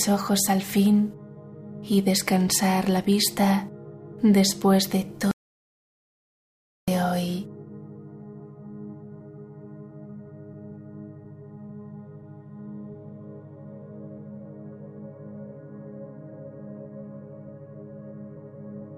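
At 5.31 s the input feeding the recording likely dropped out, perhaps a lost connection or a momentary mute, while writing carried on with silence. The result is an audio dropout to silence lasting about 1.57 s, until 6.88 s. The sound stops abruptly mid-flow and then resumes just as suddenly, and in between there is silence with no room tone at all. Whatever occurred during that stretch is simply missing.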